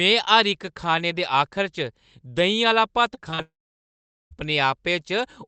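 From 3.15 to 3.19 s, then 3.31 to 3.34 s and 3.34 to 3.40 s, the speech shows short concealed packet loss. Gaps of about 20, 20 and 40 ms never arrived, and the decoder filled each by extending the preceding sound, so each one is heard as a brief smear or wobble rather than a hole. What separates these from a dropout is that the patch blends straight back into real speech, with no silence.

At 3.42 s a long network dropout follows, likely from the connection stalling, and about 0.9 s is lost. The concealed tail fades quickly, leaving roughly 0.8 s of silence before the speech resumes at 4.33 s, with the missing part simply gone. The sustained quiet is the mark of a dropout rather than packet loss. Throughout the clip the Opus call path limits the top end to 8 kHz.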